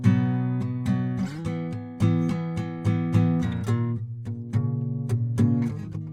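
No technical faults can be heard anywhere in this music recording.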